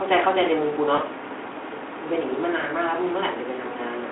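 A speech clip with two brief, smeared dropouts, at 0.95 to 1.00 s and 2.61 to 2.64 s. This is VoIP packet loss concealed by the speech codec: the decoder extrapolated over a 20 ms gap, consistent with one lost frame each time, through the telephone-band Speex stream.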